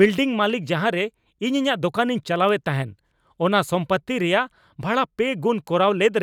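A speech clip carrying two bit error spikes, sharp isolated ticks at 2.49 s and 5.68 s. Each lasts only two samples, peaking at about -25 dBFS and about -19 dBFS respectively. A flipped bit in memory or on a digital link throws the sample value off by a power of two before it snaps back, so the tick is broadband and bears no relation to the surrounding speech.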